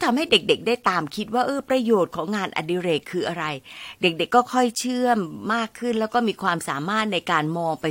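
Speech recording with no technical faults heard anywhere.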